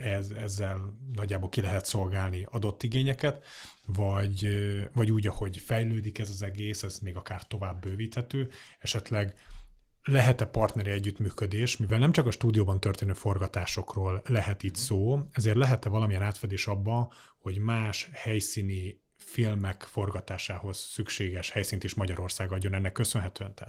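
No technical faults can be heard in this speech.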